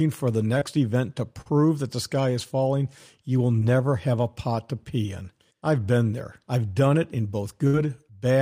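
It's a speech clip with packet trouble: short concealed packet loss at 0.59 s after "for the", 1.41 s before "that the sky is", and 3.6 s, where the receiver patches 20 to 40 ms gaps and leaves brief smears. Then a burst of packet loss at 7.67 s, after "I've done it in", drops about 60 ms into a fading, held-over tail.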